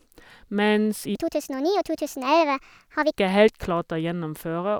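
From 1.15 s to 3.16 s there's a section at the wrong speed: the speech suddenly runs about 1.48 times too fast, pitch jumping up by roughly seven semitones, so it sounds chipmunky and rushed. Likely that stretch got played back against the wrong clock.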